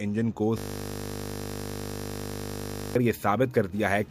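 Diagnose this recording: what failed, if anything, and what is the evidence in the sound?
A system hang loop at the driver/buffer stage runs from 0.58 s to 2.95 s. Playback froze while the hardware kept replaying the same 20 ms of audio about 120 times, which fits a ring buffer of roughly that length. At a 50 Hz repeat rate the result is a steady buzz rather than a stutter. On a waveform, one identical 20 ms cycle repeats exactly. A spectrogram shows flat horizontal lines at 50 Hz and its multiples, replacing the changing content.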